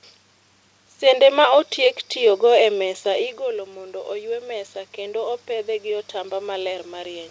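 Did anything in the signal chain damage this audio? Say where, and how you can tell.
Yes. The automatic gain in the call processing rose from 2.77 s, just after "otiek tiyo go e", to the end, after the input fell about 11 dB when the talker moved back around 3 s. Speech and room noise swell together gradually.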